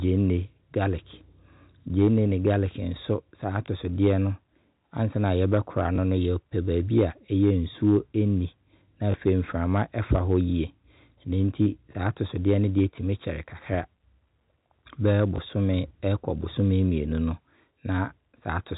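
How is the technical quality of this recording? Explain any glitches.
The speech comes through a telephone-band channel, with G.711 A-law coding cutting everything above 4 kHz, and it has four brief glitches.

Packet loss with last packet repeated hits at 3.66, 5.96, 9.12 and 15.36 s. Each time about 20 ms of audio went missing, which fits a single lost packet, and the receiver replayed the previous chunk to fill the gap. That replay seldom lines up with the pitch, and each one comes through as a small blip.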